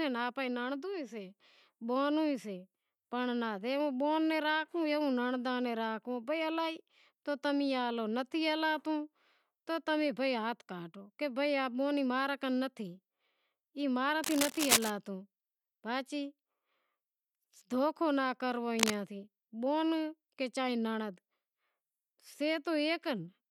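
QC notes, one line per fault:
14.24–14.90 s (after "ماں را") and 18.79–18.95 s (after "دوکھو ناں"), cable scratch noise: rough scratching bursts roughly as loud as the speech. A worn cable or connector being moved is the likely cause.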